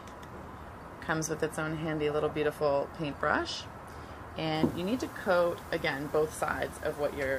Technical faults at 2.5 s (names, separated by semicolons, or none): none